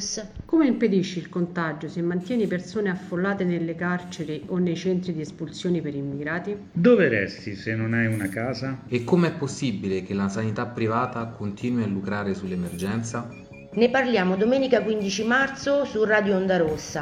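There are no technical faults to describe in this audio.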